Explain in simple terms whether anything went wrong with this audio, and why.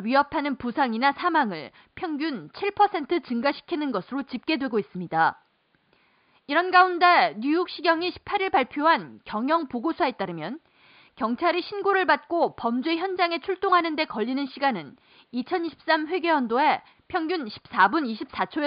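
Nothing stood out on listening to this speech recording; the only thing to notice is a faint background noise from the room itself, which belongs to the place it was recorded.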